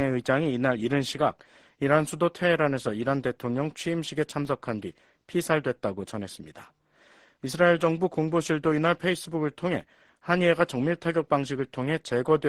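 Two single sharp clicks cut through the sound, at 4.45 s and again at 9.81 s. Each is an instant tick with no gap or dropout around it, and it shows as a thin vertical line across the spectrum. The likely cause is dropped samples. A tiny run of samples, well under a millisecond's worth, goes missing, so the waveform jumps straight from one value to a later one, and that step is heard as the click.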